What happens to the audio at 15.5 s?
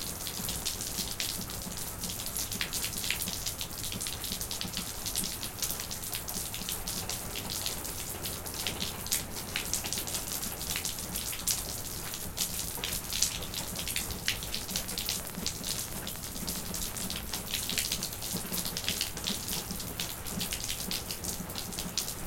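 A train of clicks runs from 14.56 to 18.03 s: about thirty similar pops at an uneven 8.4 per second, well above the sound, likely from interference.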